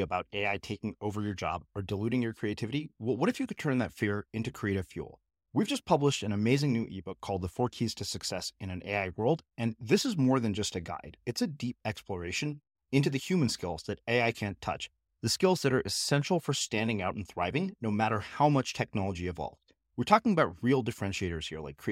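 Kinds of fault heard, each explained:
No kinds of fault are heard in this speech clip.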